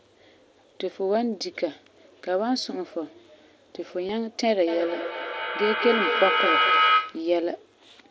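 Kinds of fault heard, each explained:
Concealed Bluetooth headset packet loss: Headset packets went missing and the receiver patched each gap by repeating recent waveform, giving brief buzzy smears rather than silent holes or clicks, at 4.08 s (22.5 ms, which fits three lost frames) and 6.69 s (15 ms, likely two frames).
Feedback howl: Two devices sharing a room formed a microphone-to-loudspeaker loop that gained level on each pass. From 4.67 to 7.37 s a tone near 1.5 kHz builds, its repeats roughly a fifth of a second apart, peaking about 3 dB above the speech. Unlike echo, its repeats grow instead of fading.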